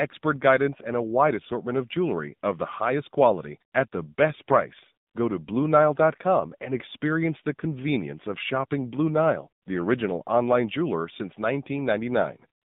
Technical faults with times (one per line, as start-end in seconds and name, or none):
0.00-12.64 AMR narrowband mobile codec
3.72-4.18 AMR comfort noise
5.06-5.14 AMR comfort noise
9.64 AMR comfort noise
12.62-12.64 AMR comfort noise